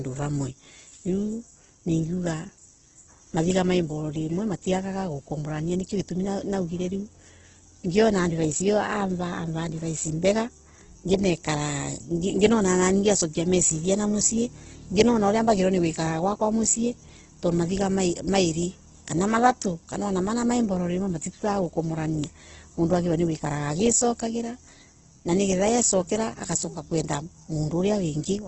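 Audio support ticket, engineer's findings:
Opus compression, throughout the clip. Symptom: heavy damage, with speech sounding rough, grainy and noisy on voiced tones and nothing above 8.1 kHz. Probable component: likely a low-rate Opus encode in music (CELT) mode, wideband. Mechanism: band energies are kept, but starved bands are filled with folded lower-band content or noise, which produces grain rather than swirl. The top cut fits a bitrate around 12 kbps.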